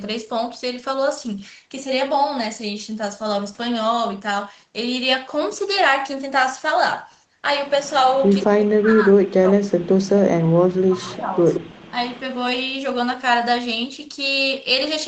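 From 8.24 to 8.46 s a faint, delayed copy of the speech trails the talker by 173 ms. This is an echo leak, likely from a loudspeaker pickup that the far side's echo canceller failed to remove. From 8.46 to 11.41 s the talker's speech sinks and breaks up, dropping by as much as about 40 dB. This is speech suppressed in double talk, likely because the canceller turned everything down while both sides overlapped. Within that stretch the same 173 ms echo returns weakly at 11.04 to 11.15 s. It is loudest at 11.54 to 11.91 s, and a brief 10 dB dip follows at 11.90 to 11.94 s. A last trace of the echo, barely audible, appears at 12.16 to 12.20 s.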